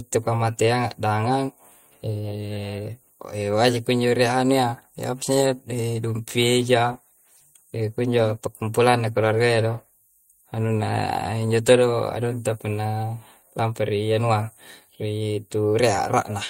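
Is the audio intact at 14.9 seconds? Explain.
No. At 14.9 s the clip is inside a call bitrate drop running from 6.59 to 15.11 s. The encoder is coding far more coarsely, with high frequencies cut off, leaving the speech rough and muffled, which fits a fall from 64 kbps to 18 kbps.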